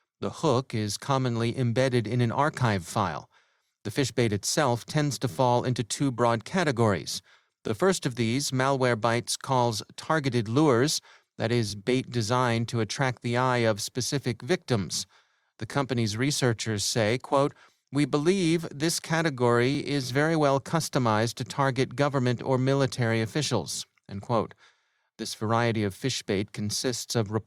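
Speech, with overlapping chunks at 7.68–7.70 s: about 23 ms replays at a join, heard as a stutter rather than a gap, as if a 4-second chunk restarted early.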